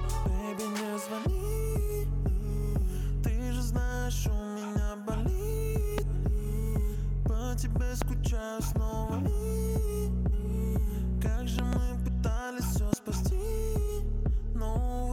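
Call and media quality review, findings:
Loud pop at 5.98–6.00, 8.02–8.04 and 12.93–12.95 s, plus a double pop at 11.59–11.75 s. Sharp thumps far above the sound, which continues underneath. Likely a voltage pulse from a plug, switch or static.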